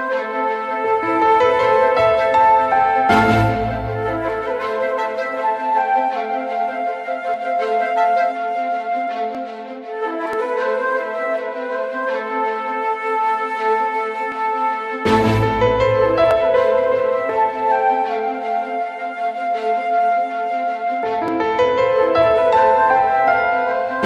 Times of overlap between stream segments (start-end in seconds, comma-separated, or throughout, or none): 7.34, 9.35, 10.33, 14.32, 16.31, 17.30, 21.28